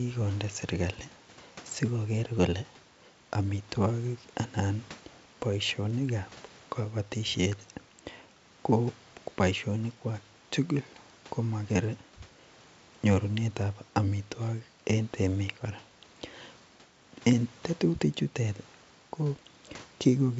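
No technical faults are audible.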